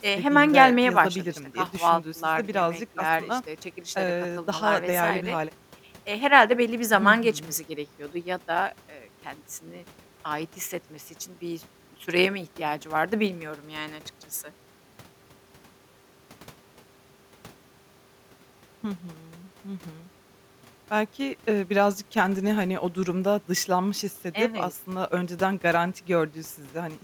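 No technical faults can be heard anywhere in this speech.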